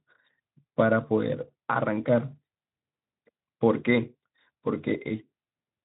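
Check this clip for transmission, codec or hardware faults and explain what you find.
No transmission, codec or hardware faults.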